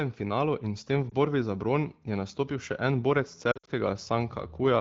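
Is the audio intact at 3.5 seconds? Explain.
No. From 3.52 to 3.70 s the speech warbles and dips in a string of short dropouts, the longest about 60 ms. These are lost AMR speech frames: corrupted frames were replaced by the wideband decoder's fading repeat of the last good frame.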